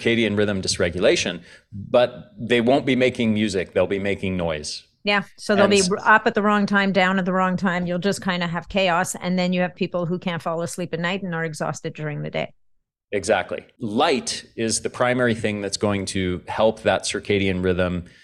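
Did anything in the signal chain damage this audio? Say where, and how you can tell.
No, nothing in the chain audibly damaged this speech recording at any stage.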